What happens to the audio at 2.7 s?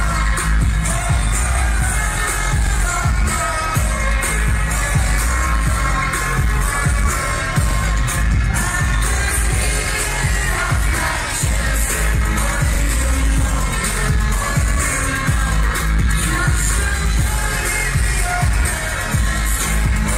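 At a chunk boundary the next block of audio was started about 44 ms before the previous one had finished, so the two overlap: overlapping chunks. The material from 2.67 to 2.71 s is played twice in a row, and the seam produces a brief click with a small stutter as the same 44 ms piece repeats. The join falls at a point consistent with audio being handled in 5-second chunks.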